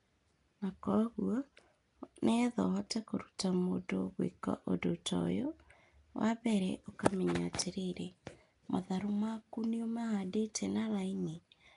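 From the start the speech carries a rough, hissy halo and a smeared, underwater quality, with nothing above about 10.6 kHz. That's most likely Nellymoser compression: fixed two-bit-per-sample coding in short blocks, leaving weak bands noise-filled, which fits a rate near 44 kbps.

At 10.54 s there's a brief pre-echo, roughly 10 ms of hiss arriving just ahead of a sharp attack. The codec spread its quantisation noise across the whole block, so noise sized for the loud onset leaked into the quiet moment before it, softening that attack.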